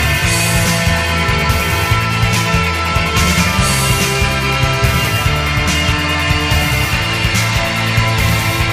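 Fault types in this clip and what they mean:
No technical fault can be heard anywhere in the audio. Nothing in it calls for a fault type to be listed.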